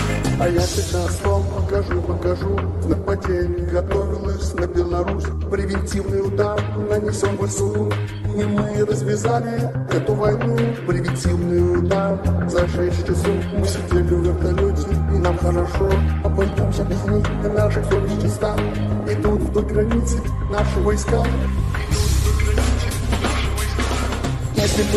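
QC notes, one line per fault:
4.63–4.86 s, 10.15–10.76 s, 12.24–13.06 s, 18.76–19.60 s, 23.87–24.76 s: DAB burbling, bursts of 0.2 to 0.9 s where the sound breaks up into short noisy blips. Weak reception leaves bit errors of well under one percent that the error protection fails to catch, so corrupted samples and scale factors reach the MP2 decoder. Wrong samples put short bursts of noise in single sub-bands and wrong scale factors make sub-bands leap in level for up to a frame, giving the blips and level jumps over the programme.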